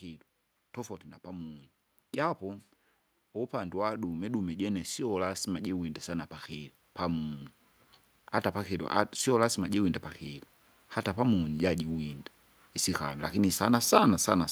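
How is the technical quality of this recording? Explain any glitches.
The recording has one audible glitch: an automatic gain rising between 3.5 and 7.44 s. Over those four seconds the automatic gain control, judging the input too quiet, steadily increased its gain by about 8 dB. Because the gain is applied to the whole signal, the speech and the background noise swell together rather than the voice alone getting louder, so the background climbs along with the talker as the level creeps upward.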